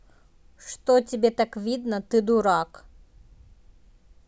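No technical faults can be heard anywhere in this speech recording. There are no events to place in time, so no timings are given.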